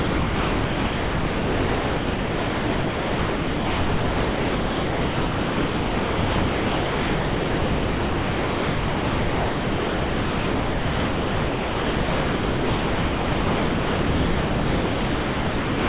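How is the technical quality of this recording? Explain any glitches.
One fault runs through the recording: comfort noise in place of the background, from 0.0 s to 15.88 s. Between phrases, the room sound, about 33 dB below the loudest speech, becomes a steady, featureless hiss about 2 dB quieter. This is likely synthetic noise generated by the receiver during discontinuous transmission. On a spectrogram those gaps show as a flat, even haze, and the waveform shows a uniform low floor. The call path's narrowband limit appears as an empty region above 4 kHz.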